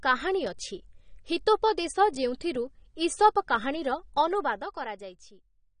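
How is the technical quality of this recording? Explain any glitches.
The speech is audibly degraded by AAC compression running through the whole clip. Nothing is present above about 9.7 kHz, and the remaining band sounds dull and smeared, with a fizzy, warbling texture on sibilants. The likely cause is an AAC-LC encode at a low bitrate, around 32 kbps, where the encoder lowers its cut-off and leaves gaps between bands. The warbling sets it apart from a plain low-pass filter, which would only dull the sound.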